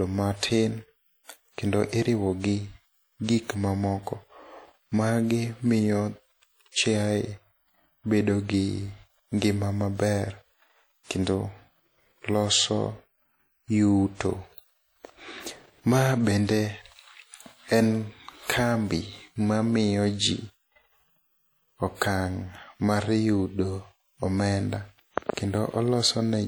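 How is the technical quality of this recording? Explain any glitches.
The technical quality is compromised by plainly audible codec damage that runs through the whole speech clip, most likely from WMA compression. A transform codec like this codes the audio in long blocks, so quantisation error spreads in time around each syllable, and weak spectral detail is dropped. The result is a ringing, washy texture with hiss that swells and fades along with the speech. The level of damage fits a bitrate around 48 kbps, although content still reaches about 20.1 kHz.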